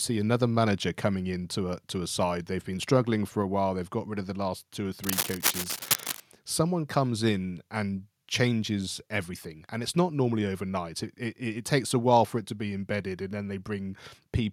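From 5.04 to 6.20 s, just after "the last two or", a dense, uneven scratching and rustling rides over the speech for a little over a second, roughly as loud as the voice itself. This is cable scratch noise. It likely comes from a worn cable, connector or control being moved, so that its contact resistance jumps around rapidly and injects irregular bursts of noise into the signal until the movement stops.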